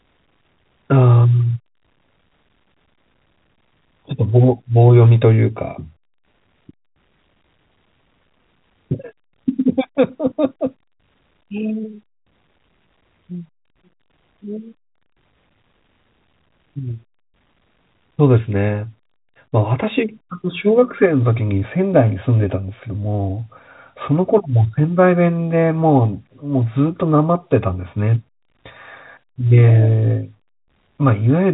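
No technical fault can be heard in the speech: it comes through G.711 telephone coding as expected, with nothing passing above about 3.8 kHz.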